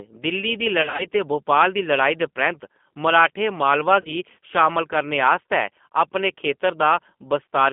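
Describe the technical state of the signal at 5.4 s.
The speech at 5.4 s, as throughout the clip, has passed through G.729 codec coding, which fits G.729A at 8 kbit/s. It rebuilds each 10 ms frame from a vocal tract filter, a pitch predictor and a few pulses, leaving a 200 Hz to 3.5 kHz band and a plainly rough, synthetic tone.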